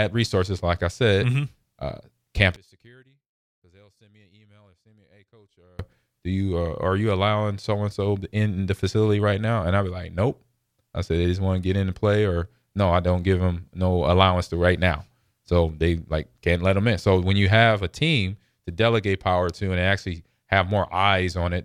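From 2.56 to 5.79 s the speech collapses by about 33 dB to a faint residue, likely from one channel inverted cancelling on a mono sum. Unlike a dropout or gain cut, a faint trace remains rather than silence or a uniformly quieter voice.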